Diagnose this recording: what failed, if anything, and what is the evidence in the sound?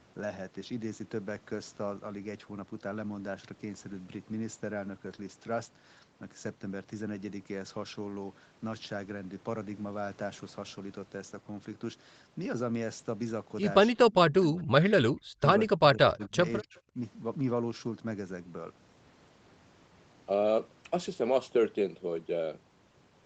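The fault sits in call processing, at the echo canceller. The speech drops sharply from 14.41 to 15.12 s, from 15.4 to 16.4 s, from 16.61 to 16.75 s and from 16.94 to 16.99 s. The first dip is about 40 dB deep and the later ones are shallower, down to about 10 dB. This is speech suppressed in double talk: the canceller likely mistook local speech for loudspeaker echo while the far side was talking, and attenuated everything. On a spectrogram these show as darkened vertical gaps, deepest in the first. On the waveform the envelope collapses.

Around the same stretch there is a brief echo leak. Faint copies of earlier speech surface from 16.21 to 16.28 s and from 16.75 to 16.8 s, about 30 to 35 dB below the speech and delayed 267 ms. Residual echo likely slipped past the canceller's suppression and was sent back. A spectrogram shows weak harmonic traces that repeat the pattern from a quarter-second earlier. 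On the waveform they are small bursts. Throughout, the spectrum stops at 8 kHz, which fits a wideband Opus call path.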